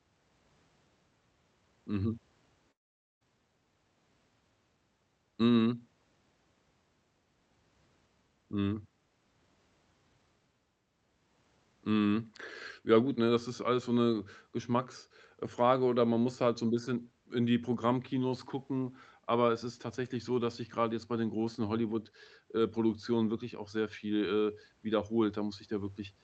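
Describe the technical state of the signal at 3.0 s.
At 3.0 s the audio is silent within a gap from 2.71 to 3.23 s. A likely long network dropout. Sound fades briefly, then half a second goes missing before audio resumes.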